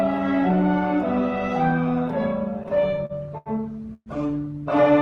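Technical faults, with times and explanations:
2.63–3.49 s, repeated stalls (stutter): the audio hitches eight times as late packets leave the jitter buffer empty and the receiver stretches the last sound, about 184 ms in all, the longest wait 81 ms. On a spectrogram, smeared horizontal streaks repeat at each hitch.
3.94–4.09 s, call audio freeze: the sound holds as a fading buzz for 122 ms, ending in about 50 ms of near silence, then resumes where it stopped. The likely cause is held-up packets. The waveform shows a decaying tail, then a flat gap.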